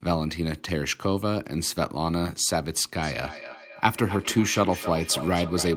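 Speech clip with feedback echo between two devices from 2.98 s to the end: the sound returns roughly every 0.3 s, peaking about 11 dB below the speech, as a second device's playback re-enters the microphone unchecked by echo cancellation.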